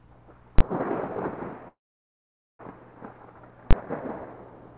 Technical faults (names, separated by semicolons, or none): invalid numbers at full scale; call audio freeze